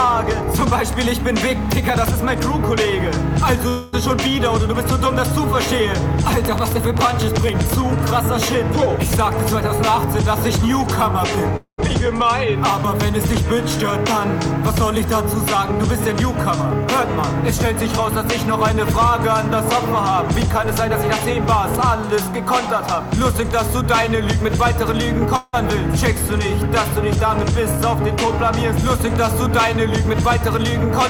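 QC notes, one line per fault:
3.69–3.95 s: long network dropout. About 240 ms of sound is gone and replaced by a fading buzz with no silent gap, likely from packets that never arrived.
6.33–7.62 s: train of clicks. About ten similar clicks at a regular 7.8 per second, peaking about 15 dB above the sound, likely from electrical interference or a faulty connection.
11.57–11.80 s: long network dropout. About 220 ms is lost. A fading fill gives way to roughly 90 ms of silence before the sound resumes, likely from a stalled stream.
25.36–25.55 s: long network dropout. About 180 ms is missing, covered by a decaying buzz and a very brief gap, likely from packet loss on the link.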